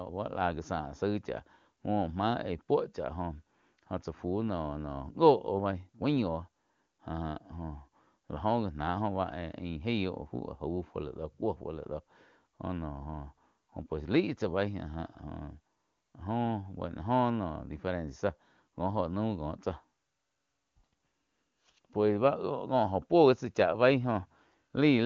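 No faults are audible; the speech is carried over the AMR wideband (HD Voice) codec at 23.85 kbit/s, its top rate, where any coding damage is faint at most.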